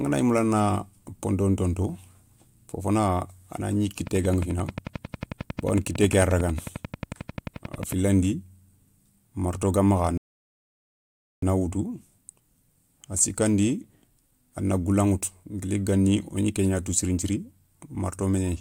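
From 4.07 to 7.93 s there's a train of clicks, about forty evenly spaced ticks at 11.2 per second, roughly 10 dB above the speech. They're likely interference from nearby equipment. Then at 10.18 s comes a rebuffering stall: the player ran dry and went silent until 11.42 s, then picked up exactly where it stopped, adding 1.25 s.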